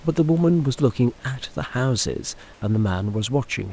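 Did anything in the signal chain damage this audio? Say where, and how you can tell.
Yes. Comfort noise in place of the background, 2.54 to 2.62 s: for 80 ms the background turns flat and featureless, about 1 dB quieter, likely discontinuous transmission in call processing.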